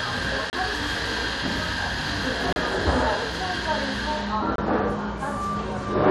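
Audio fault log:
0.50–0.53 s, 2.53–2.56 s, 4.56–4.58 s: gap between stream segments. Hard-edged silences of about 30, 34 and 25 ms, roughly every 2 s, occur where segment timestamps don't quite meet and the player pads the gap with silence. No audio is lost.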